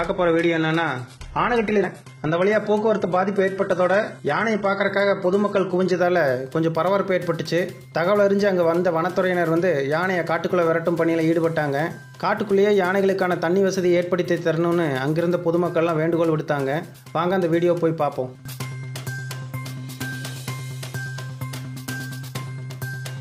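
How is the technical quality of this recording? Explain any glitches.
The recording has two distinct technical faults: a low-quality opening and a later electrical tone.

For the first 6.0 s, the audio shows an adaptive stream starting at a low bitrate. The player began on a cheap version of the stream so playback could start quickly. The sound fits roughly 16 kbit/s HE-AAC. Treble is thin and partly synthesised, and codec artefacts are pronounced. At 6.0 s it jumps, with no gap, to something consistent with 96 kbit/s AAC-LC. On a spectrogram the early section has nothing above about 11.8 kHz, then the upper band fills in abruptly.

From 8.26 to 12.75 s, a USB whine appears. The bus draws current in 1 ms frames, and that pulsing leaks in through the power or ground and becomes a fixed 1 kHz tone. It sits about 40 dB below the wanted signal, so it is faint. On a spectrogram it shows as a thin horizontal line at 1 kHz. 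The waveform barely changes at this level.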